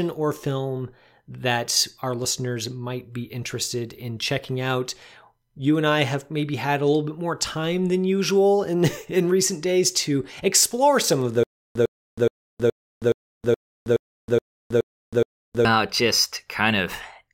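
Stutter with silent gaps runs from 11.43 to 15.65 s in this speech clip, right after "to explore some of": a 102 ms burst repeats ten times, each followed by 320 ms of digital silence, a 422 ms cycle. This is likely a stalled stream replaying its last fragment, and the intended audio is lost.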